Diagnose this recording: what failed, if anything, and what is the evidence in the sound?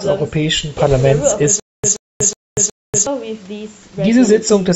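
Stutter with silent gaps, from 1.6 s to 3.07 s in the speech: a 127 ms fragment repeats four times at an even 367 ms period, each followed by about 240 ms of digital silence. This points to the playback or streaming buffer, likely a stalled stream: at each retry the player re-rendered its last fragment and then ran empty, so the audio due in that span is lost. The band ending at 8 kHz fits the call microphone path.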